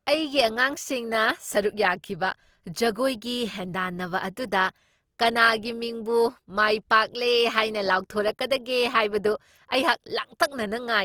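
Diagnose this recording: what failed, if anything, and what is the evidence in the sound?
The codec stage is where this went wrong: Opus compression, likely at a low rate, fits a bitrate around 24 kbps. The speech sounds grainy and rough throughout, but the band still reaches about 20.2 kHz, so the music mode is filling thin bands with folded or noisy energy rather than muffling.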